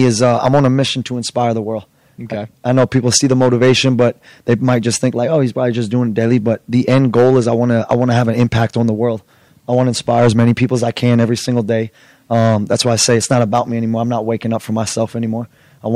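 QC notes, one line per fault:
Throughout, hard clipping. The speech was driven about 8 dB past what a stage could pass, so its loudest peaks are sliced flat. Only a small share of the signal hits that ceiling. The squared-off tops add high harmonics, heard as crackle on louder syllables.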